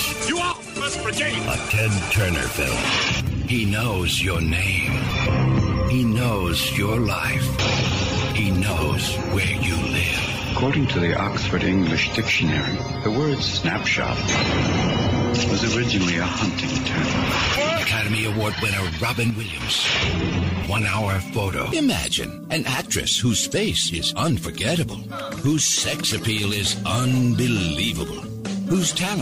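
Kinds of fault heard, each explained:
Sudden gain jump: at 0.52 s the level drops by about 9 dB, holding until 0.76 s, and at 19.30 s it drops by about 6 dB until 19.60 s, with sound and background noise falling together in one step. That points to a gain setting likely applied without a ramp, unlike a fade, which glides.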